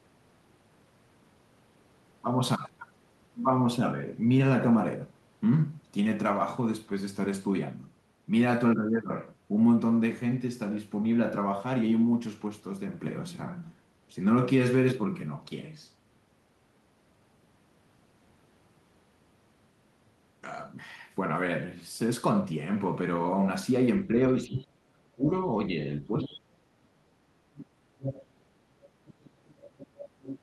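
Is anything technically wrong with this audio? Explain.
Yes. From 24.47 to 27.61 s, speech is suppressed in double talk. The talker's speech dips by up to about 35 dB, likely because the echo canceller turned down both talkers at once.

The other side's voice is leaking through at 24.53 to 24.64 s, 26.21 to 26.37 s, 27.61 to 27.65 s, 27.99 to 28.22 s, and 29.06 to 30.39 s. These are likely loudspeaker echo the canceller missed. Most sit about 10 to 15 dB below the speech, and the 27.61 s scrap is about 25 dB down.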